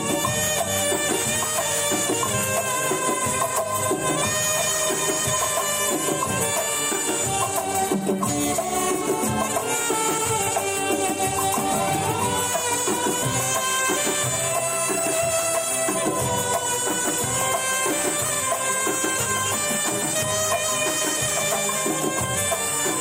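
No technical faults can be heard anywhere in the signal.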